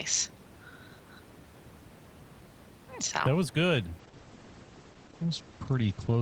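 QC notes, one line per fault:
4.00–6.22 s, call bitrate drop: after "was good" the encoder's bitrate falls from 32 to 10 kbps and stays low for about 2.2 s, with audio bandwidth narrowing from 20 kHz to 8 kHz. Coarser coding makes the speech rough and watery, and the lost highs leave it muffled to the end.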